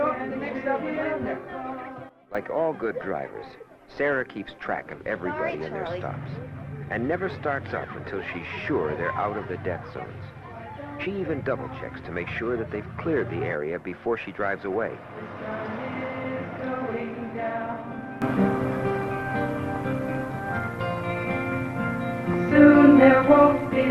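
At 2.09 s a sudden gain jump drops the level by about 14 dB, with background noise falling alongside, until it snaps back at 2.35 s. At 18.22 s a second jump raises everything by about 15 dB through to the end, likely from unramped digital gain changes.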